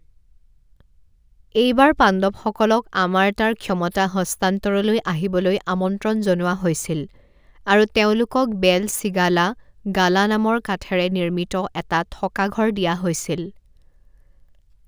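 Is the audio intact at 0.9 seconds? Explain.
No. Crude rate conversion runs throughout, including 0.9 s. Linear interpolation, consistent with 32 kHz up to 44.1 kHz, leaves inharmonic fizz around 30 dB under the speech, visible as faint mirrored spectrogram streaks.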